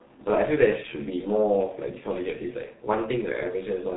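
Speech runs through the G.723.1 codec for its whole length, and the damage is heavy: nothing survives above 4 kHz, consonants smear, and the voice turns muffled and hoarse, which fits a rate of about 6.3 kbit/s. Unlike a plain low-pass or clean narrowband telephone line, the long 30 ms frames and slowly updated voice model add a rough, buzzy texture and blur quick transitions, not just dullness.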